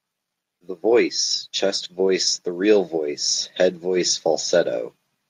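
A speech clip with automatic gain rising from 0.6 to 2.97 s: the gain control sees a quiet input and lifts level by about 4 dB, so voice and background swell together.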